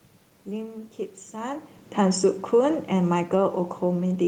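Automatic gain falling begins at 2.39 s and continues to the end. The gain control judged the input too loud, or its background noise too strong, and lowered its gain, so the speech and the room noise behind it sink together, unlike the talker's movement near 1.5 s.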